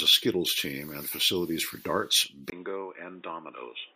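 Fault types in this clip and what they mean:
input switched to a poorer device: Input likely moved to a lesser microphone or headset path at 2.5 s, after "and facilities for darts". A 20 ms gap marks the switch; the speech loses everything above 3.7 kHz, turns quieter and boxier, and gains faint background noise.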